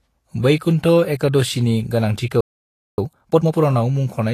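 A speech recording with artefacts throughout that sound like an earlier heavy compression rather than the current MP3 encoding. This is likely low-bitrate audio saved at a high bitrate, which fits a Vorbis original at around 34 kbit/s re-encoded as a 192 kbit/s MP3 that cannot restore what was lost. At 2.41 s the sound cuts out mid-flow and stays silent until 2.98 s, a gap of about 0.57 s. That is a playback stall, likely the player running short of data or being blocked. From 2.98 to 3.54 s the speech rushes along at double speed with its pitch unchanged. That is time-compressed catch-up, with the player cutting and cross-fading small pieces to clear the backlog built up during the stall.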